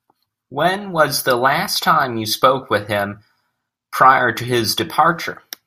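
No technical faults occur at any point in the clip, so there are none to describe in time order.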